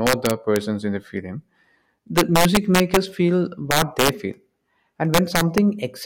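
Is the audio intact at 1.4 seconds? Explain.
Yes, the speech at 1.4 seconds is intact, with no dropout, click, distortion or other fault audible at that moment.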